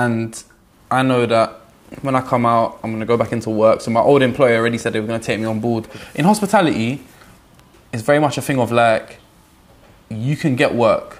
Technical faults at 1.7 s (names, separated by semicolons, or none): none